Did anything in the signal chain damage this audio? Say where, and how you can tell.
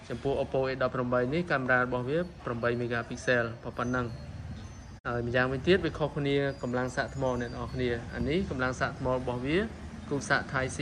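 Yes, there's a digital broadcast dropout at the reception stage. Around 4.97 s the sound fades out over about 20 ms, and it's silent until 5.06 s. That roughly 48 ms hole fits a couple of corrupted frames that the receiver muted until clean data returned.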